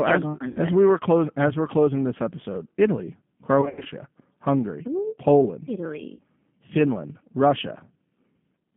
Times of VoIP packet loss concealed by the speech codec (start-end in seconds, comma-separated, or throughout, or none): 0.48-0.59, 3.61-3.88, 6.15-6.21